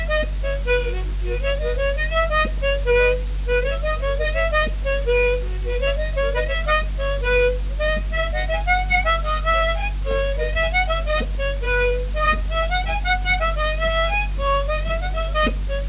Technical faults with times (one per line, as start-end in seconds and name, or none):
none